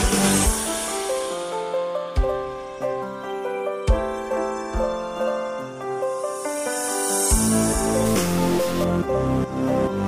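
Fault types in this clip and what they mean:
Stuck bit: from about 8.05 to 8.84 s the sound turns harsh and buzzy, with a gritty error riding on the waveform at a step of roughly -30 dBFS, likely one data bit held fixed so about half the samples land off by that amount.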